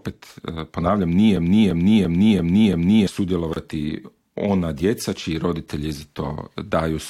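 A system hang loop runs from 1.37 to 3.07 s: the driver froze while the hardware replayed one 341 ms piece five times, a stutter at about 2.9 Hz. The repeating length fits a 16384-sample buffer, and roughly one and a half seconds of audio are lost.

A gap at a join of encoded pieces follows at 3.54 s, a 27 ms silence with smeared edges. It comes from encoder delay and final-frame padding left in where separately encoded pieces meet, and the sound then resumes where it stopped.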